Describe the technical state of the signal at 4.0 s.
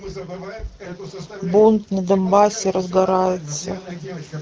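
At 4.0 s the audio is intact, with no fault present, and the speech there carries the band-limited character of an AMR wideband (HD Voice) codec at 12.65 kbit/s.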